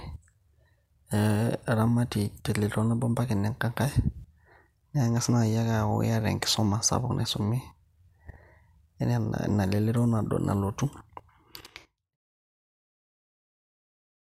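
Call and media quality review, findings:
Nothing to flag on this one, just a gentle editor-style fade-out that eases the level down from around 11 s to its end at 12.17 s, with no click or hard edge.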